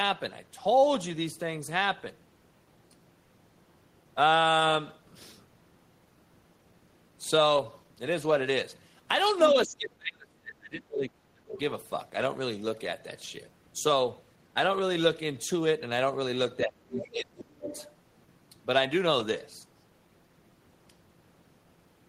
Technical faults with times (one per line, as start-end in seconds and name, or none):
9.53-11.57 speech suppressed in double talk
11.53-11.59 other side's voice leaking through
16.65-17.69 speech suppressed in double talk
16.96-17.89 other side's voice leaking through